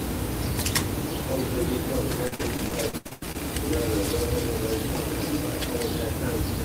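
Repeated packet loss (robotic sound) runs from 2.27 to 3.36 s: around ten dropouts, the longest 86 ms, each patched by extending the preceding sound, so roughly a third of that stretch is synthetic and choppy. A spectrogram shows smeared, repeated bands broken by abrupt vertical seams.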